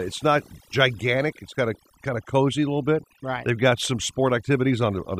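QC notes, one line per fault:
Throughout: overdone noise removal. The noise reduction was pushed too hard, so any frequency band sitting close to the noise estimate gets pulled way down or shut off, and quieter parts of the speech go with it. That leaves near-silent gaps dotted with twinkly specks.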